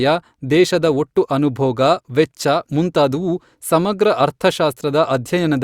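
No technical faults are audible anywhere in this recording.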